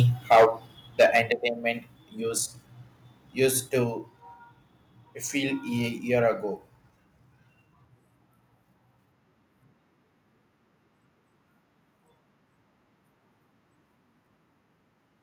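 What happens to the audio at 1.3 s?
From 0.99 to 1.32 s the loudest syllables carry a harsh, crackling edge: microphone overload, with the input likely set about 9 dB too hot, so a small share of peaks had their tops flattened at the converter's ceiling. Unlike codec distortion, the crackle tracks only the loudest moments.

At 1.32 s the microphone volume is stepped down: voice and background fall together by about 5 dB in one instant, likely the call software reacting to that clipping. A single clean step marks it out, unlike a compressor's gradual gain riding.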